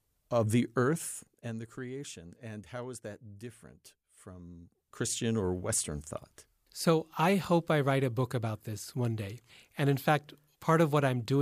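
A speech clip, and between 4.64 and 5.11 s there's zipper noise: the level drops or rises by something like 15 dB in under half a second, but instead of gliding it moves in discrete jumps, roughly fifty a second. Each jump puts a tiny click into the speech, so you get that ticking, zippy texture riding on the sound while the gain moves. This gain change wasn't smoothed between steps.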